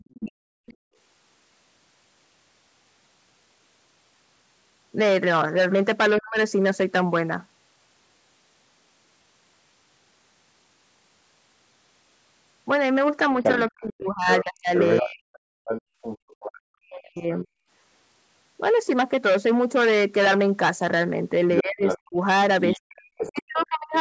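From 0.0 to 0.73 s a faint second voice sits far beneath the talker, roughly 30 dB down: the other side's voice leaking through, likely because the far end played on a loudspeaker and the echo canceller left a residue in the microphone. Over the same stretch, from 0.2 to 0.74 s, the talker's own speech dips and breaks up for about half a second, sinking by as much as 40 dB or so. That is speech suppressed in double talk, likely the canceller ducking everything while both sides overlapped. A shorter dip of the same kind hits from 6.2 to 6.37 s.

The worst passage runs from 13.43 to 16.6 s. The leaked voice there is almost as loud as the talker, only about 5 dB below, and it sounds like a second voice running underneath. From 13.7 to 17.56 s the talker is chopped and pulled down in pieces adding up to around 2 s, again likely double-talk suppression. Inside that, from 15.82 to 16.28 s, the room sound itself drops out for about 0.2 s, falling by about 32 dB before springing back: background gated by the echo canceller clamping the microphone while the loudspeaker played.

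From 21.57 s to the end at 24.0 s, the other side's voice leaking through returns at nearly the talker's level, likely uncancelled loudspeaker echo. From 21.62 to 23.94 s, speech suppressed in double talk cuts the talker in and out for roughly 1.5 s in total. Throughout the clip, the audio carries nothing above 8 kHz from the call's microphone processing.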